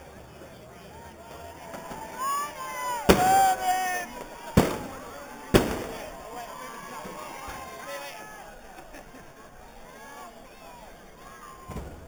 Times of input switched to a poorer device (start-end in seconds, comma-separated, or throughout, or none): none